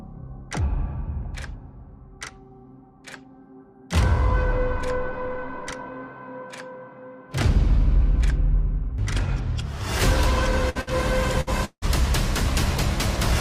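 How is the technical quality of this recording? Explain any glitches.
The recording has clear network faults, all packed into about a second near the end.

Three bursts of packet loss fall at 10.69 to 10.78 s, 10.81 to 10.90 s and 11.41 to 11.50 s. In each, about 60 ms of audio never arrived. The receiver spun the last sound on for roughly 57 ms, fading it into a brief buzz or hiss before the audio resumed slightly further along. These gaps are short enough that concealment covers them completely, with no true silence.

A long network dropout follows at 11.65 to 11.85 s. The audio is likely to have stopped arriving, losing about 180 ms. Concealment stretches the last sound for about 170 ms as a fading buzz or hiss. Unlike the bursts, it then runs out, leaving roughly 60 ms of silence before the sound returns further on.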